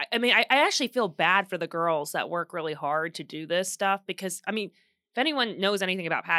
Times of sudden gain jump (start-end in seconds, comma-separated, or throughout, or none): none